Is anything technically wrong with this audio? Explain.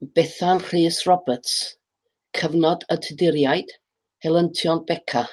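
No, nothing in this speech clip points to a technical problem. It has passed through a WebRTC call path, and the top end stops at about 12 kHz, which fits the Opus codec working at its normal bandwidth.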